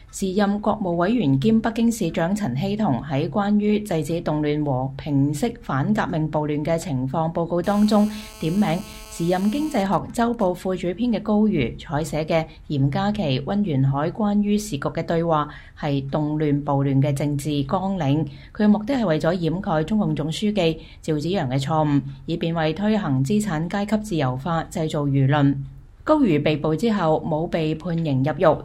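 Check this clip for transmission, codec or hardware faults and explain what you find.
Two hardware faults, both caused by radio interference from a nearby 2G mobile phone picked up by the audio circuitry.

GSM phone buzz, 7.64 to 9.83 s: a phone on an active call transmits in bursts 216.7 times a second, and the audio input rectifies each radio pulse. The result is a steady, harsh, raspy buzz at about 217 Hz, rich in harmonics and unrelated to the audio, sitting about 21 dB below the signal.

GSM signalling bursts, 9.86 to 10.59 s: the call continues but its user falls silent, so the phone sends only sparse groups of bursts, still rectified by the circuit. The continuous buzz gives way to even ticks with a longer 217 Hz buzz twice a second, fainter, roughly 30 dB down.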